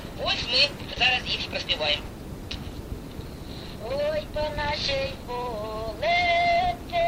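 A short concealed packet loss sits at 0.93 to 0.98 s in this audio. About 20 ms never reached the decoder in time, so the receiver stretched the preceding sound over 22 ms and blended back. The result is a brief smear, not the abrupt silent hole of an unconcealed dropout.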